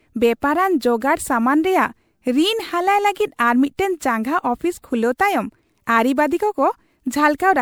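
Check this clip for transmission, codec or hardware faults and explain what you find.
One fault runs through the whole speech clip: generation loss. From start to finish the sound is swirly and hollow, with smeared consonant attacks and a watery shimmer, and nothing above 20.9 kHz. The damage is heavier than a single pass at a bitrate that sounds like 128 kbit/s MP3 would cause. The likely cause is repeated lossy re-encoding, roughly four times, each pass re-quantising on a shifted frame grid so noise and spectral holes accumulate.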